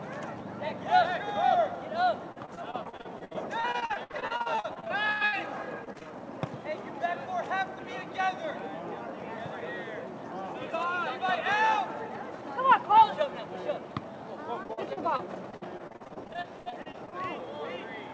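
Repeated packet loss (robotic sound) occurs from 2.32 to 5.35 s, 5.85 to 6.07 s and 14.63 to 17.14 s. Lost packets are patched by extending prior sound, giving choppy stretches with gaps up to 93 ms.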